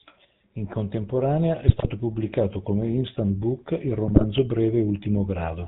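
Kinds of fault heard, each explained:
GSM full-rate codec: The whole clip carries the buzzy, gravelly texture of a vocal-tract model driven by sparse regular pulses, and nothing above 4 kHz comes through. The damage is plainly audible throughout, consistent with a 13 kbps full-rate link.
GSM bit errors: Corrupted filter, pitch or gain parameters reach the decoder, so frames decode with a bent spectrum or a level jump. Here the speech breaks into squawks and gargling from 1.66 to 1.89 s, just before "pubblicato come instant book", and again from 4.08 to 4.26 s, right after "come instant book il".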